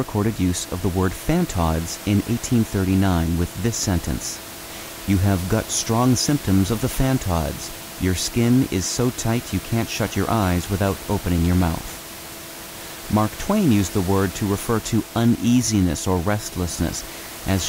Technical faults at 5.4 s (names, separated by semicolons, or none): none